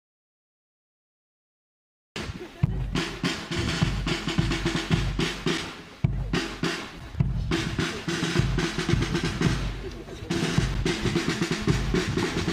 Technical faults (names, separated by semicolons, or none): block of digital silence